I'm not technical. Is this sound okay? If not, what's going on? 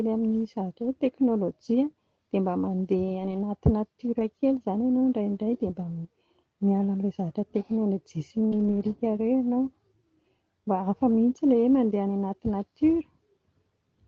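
No. There are two kinds of dropout, both from pieces of the call arriving late or not at all.

Lost packet rebuilt from error correction: at 0.83–0.85 s (just before "hoe teknôlôjia"), 3.19–3.45 s, 4.19 s, 8.52–8.82 s, and 11.10–11.12 s (just before "mihintsy ilay hoe"), the missing audio was replaced by a lower-quality backup copy. Nothing goes silent, but those moments sound briefly rough and grainy.

Short concealed packet loss: at 8.47–8.54 s, about 40 ms of audio had no backup copy at all. The receiver guessed by stretching the last sound, so this moment has a brief smear or wobble rather than the grainy texture. The rough backup-copy stretch follows right after it.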